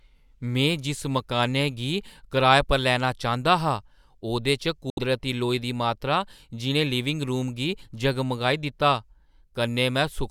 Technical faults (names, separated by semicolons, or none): Bluetooth dropout